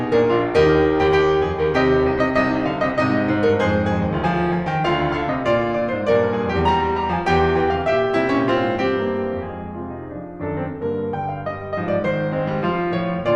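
This music clip has nothing technically wrong with it that can be heard.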